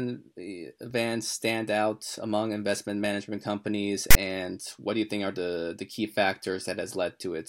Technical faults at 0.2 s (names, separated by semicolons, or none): none